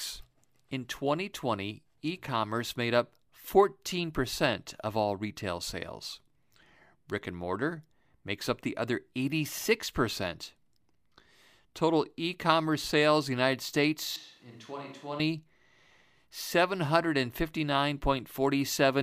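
From 14.16 to 15.20 s the recording likely loses its close microphone and falls back on a distant one, a switch to a distant microphone. For that second the voice turns roomy and hollow all at once, thinner in the low end and roughly 10 dB quieter, while background room noise rises to sit only about 30 dB below the speech. The change in at 14.16 s and back out at 15.20 s is abrupt, with no fade either way.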